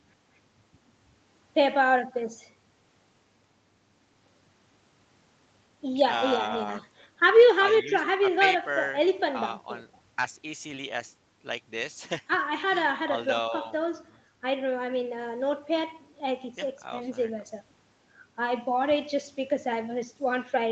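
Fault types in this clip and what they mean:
There are no fault types in this clip, so there is nothing for them to mean.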